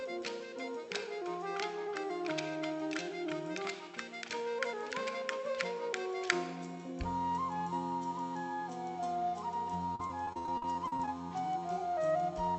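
From 9.86 to 11.08 s the sound turns choppy and robotic from repeated packet loss: many short holes, the longest 62 ms, each patched by stretching the preceding audio. A spectrogram shows smeared, repeated slices, all capped near 8 kHz by the call codec.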